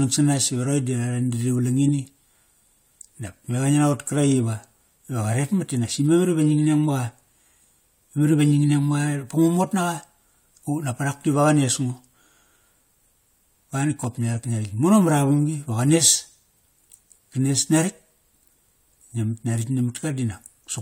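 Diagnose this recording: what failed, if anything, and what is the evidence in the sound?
The failure is an overlap between stream segments at the streaming and playback stage. Two adjacent segments carried time stamps that overlapped, so the player trimmed the apparent duplicate even though that audio was not actually repeated. A few milliseconds of speech are lost, and the waveform jumps across the gap. The result is a brief click or micro-skip at 2.06 s and at 14.04 s, twelve seconds apart, which fits 6-second segment boundaries.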